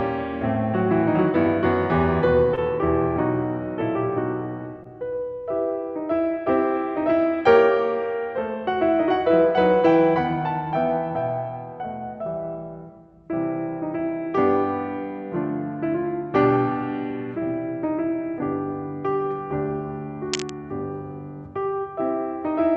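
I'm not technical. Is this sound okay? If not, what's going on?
No. Twice, at 2.55 s and 4.83 s, a sliver of the music arrived too late over the call. This is short concealed packet loss: the receiver patched each gap by extending the previous sound, leaving a quick smear or wobble. From 20.33 to 20.50 s there is cable scratch noise, likely from a worn cable or connector being moved, giving a burst of scratchy rustling over the music.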